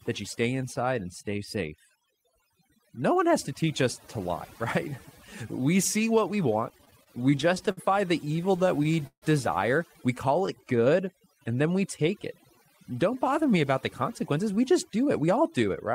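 Throughout the speech, the background is near-silent and twinkling: overdone noise removal, with the suppressor cutting quiet frequency bands along with the noise.

From 6.69 to 7.79 s, right after "see what we", and again from 8.25 to 9.24 s, the audio drags and stutters in repeated stalls. Late packets kept emptying the jitter buffer, and the receiver stretched the last sound to fill each gap, the longest about 150 ms.

Between 10.40 and 12.03 s, drawn-out sounds run at about 91% speed with unchanged pitch. This is a jitter buffer slow-down, where repeated pitch periods added roughly 150 ms to rebuild its reserve.

From 14.09 to 15.89 s, after "bother me about the", the speech sounds slightly hurried at about 106% speed. This jitter buffer speed-up trimmed about a tenth of a second to reduce excess delay.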